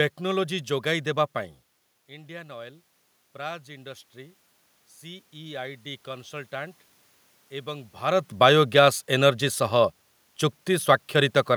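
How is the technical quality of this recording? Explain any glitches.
The recording has one technical glitch: automatic gain rising. Room noise is present throughout, and the talker moves relative to the microphone around 1.5 s and again near 8 s.

From 2.08 to 4.45 s, the automatic gain rises. The input level had dropped by about 16 dB. The gain control read this as too quiet and slowly pushed its gain up by about 5 dB. Voice and room noise swell together over more than two seconds. The background audibly lifts along with the voice.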